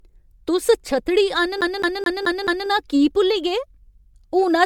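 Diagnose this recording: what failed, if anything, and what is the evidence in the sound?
Throughout the speech, the sound is swirly, hollow and smeared, with soft consonant attacks, though content reaches 20 kHz. That points to a codec-stage fault, likely generation loss from about seven MP3 passes at 128 kbit/s. A single encode would not pile up this much noise and hollowness.

From 1.61 to 2.69 s, after "तुस छत्तड़ी" and before "की भुल्ली गे", the same 0.22 s of speech plays five times, with a brief mute at each jump. That is a storage and playback fault, a CD stuck on one turn. The even loop length and clean gaps set it apart from a network stutter or a buffer glitch, which wander in length.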